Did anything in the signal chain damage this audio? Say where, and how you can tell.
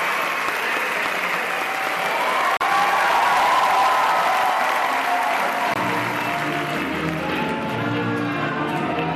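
Yes. Two brief dropouts at 2.57 to 2.61 s (about 39 ms) and 5.74 to 5.76 s (about 21 ms) point to the wireless playback link, most likely a Bluetooth stall: held-up packets let the headphone buffer run empty, so output halted until resent data arrived. On the waveform the trace drops abruptly to flat silence and resumes just as sharply. A spectrogram shows narrow, full-height vertical blank columns at those times.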